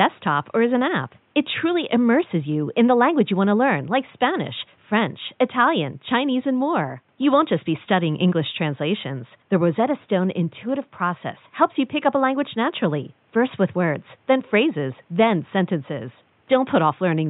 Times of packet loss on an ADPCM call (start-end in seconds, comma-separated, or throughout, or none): none